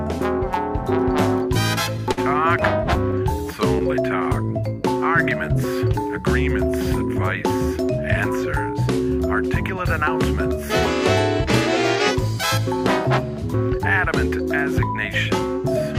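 At about 2.12 to 2.19 s there's a short stall from a late packet: the jitter buffer ran dry, so the receiver stretched the last sound by roughly 50 ms until the packet turned up, then carried on. Nothing's lost, it just hangs there briefly, with a faint buzzy wobble.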